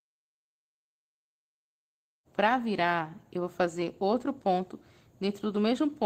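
No technical faults can be heard in this audio.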